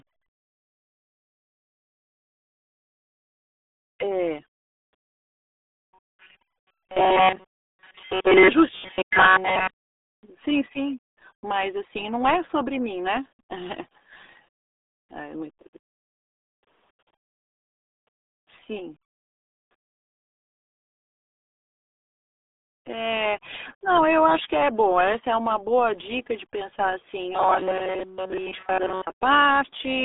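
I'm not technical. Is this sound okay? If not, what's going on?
No. The whole clip has gone through the RealAudio 14.4 codec, an old dial-up-era speech format. It drops everything above about 3.8 kHz. So the speech sounds muffled and gargly, like a bad phone line, from start to finish.

There are also three stretches of robotic sound from repeated short buffers: 4.9 to 8.5 s, 8.7 to 10.1 s, and 27.3 to 29.1 s, right after "dica de pensar assim". The voice becomes a stiff metallic buzz near 188 Hz. Most of the real audio there is lost. The likely cause is the player repeating a tiny scrap of sound, about 5 ms long, whenever new audio arrives too late.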